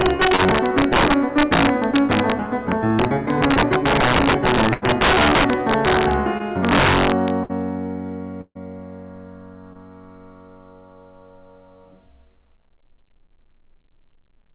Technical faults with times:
0.01-2.32 integer overflow
0.36-0.40 short concealed packet loss
2.72-6.13 integer overflow
3.54-3.57 short concealed packet loss
4.73-4.84 burst of packet loss
6.38-6.42 short concealed packet loss
6.65-7.30 integer overflow
7.44-7.51 burst of packet loss
8.41-8.57 burst of packet loss
9.73-9.77 short concealed packet loss

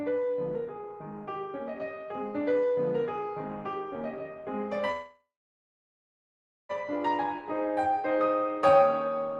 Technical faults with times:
4.91-6.71 call audio freeze

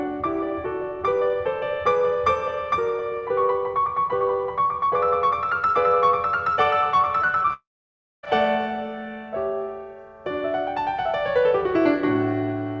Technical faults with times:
7.22-7.51 repeated packet loss (robotic sound)
7.53-8.25 long network dropout

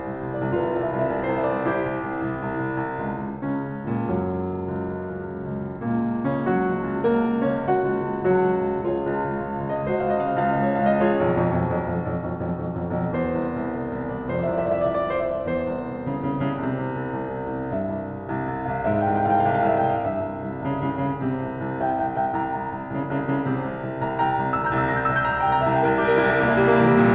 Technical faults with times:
none

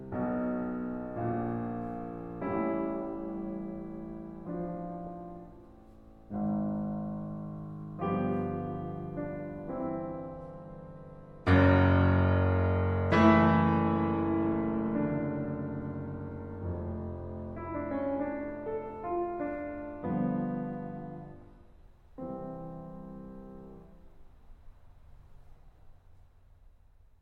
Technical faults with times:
9.84-21.84 adaptive stream at a lower bitrate

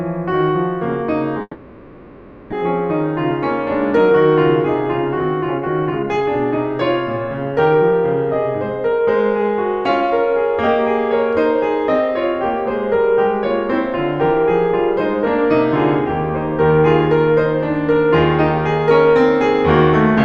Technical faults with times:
1.41-2.54 long network dropout
4.98-6.27 jitter buffer speed-up
7.45-7.92 jitter buffer speed-up
8.92-9.49 jitter buffer speed-up
10.01-10.69 jitter buffer speed-up

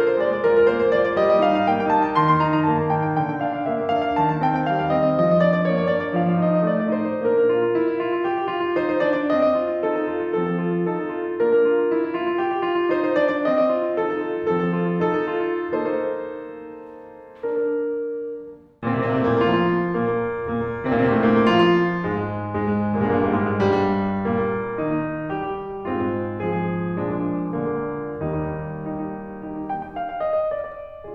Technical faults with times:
0.00-31.14 doubled audio track

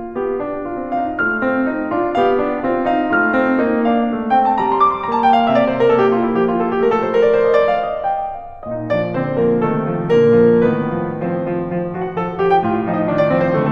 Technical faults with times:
none

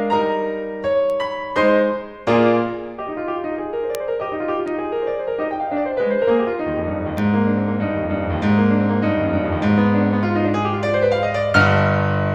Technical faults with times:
1.10 bit error spike
3.95 bit error spike
4.68 bit error spike
7.18 bit error spike

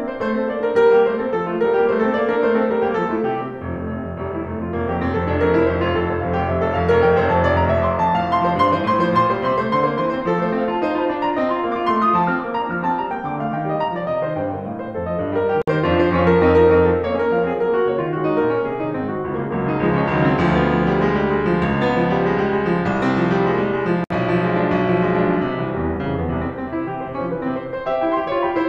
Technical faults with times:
15.62-15.68 gap at a join of encoded pieces
24.04-24.10 gap at a join of encoded pieces

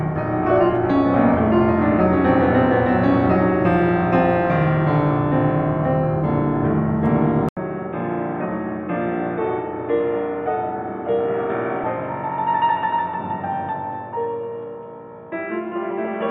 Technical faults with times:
7.49-16.31 input switched to a poorer device
11.81-12.07 DAB burbling

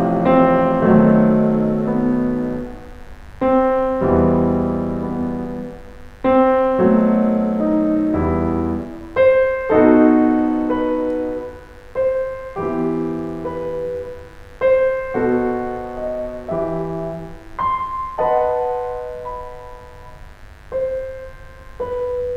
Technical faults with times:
0.00-22.36 mains buzz

